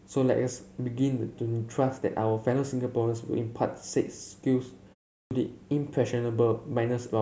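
At 5.23 s, after a pause of about 0.37 s, there is a clipped start after a pause: the playback device had dropped into a low-power state during the silence and needed time to wake, so roughly the first 79 ms of the returning speech, up to 5.31 s, never reaches the output. The speech jumps in abruptly with its onset missing. This differs from muted pauses, where no speech is lost.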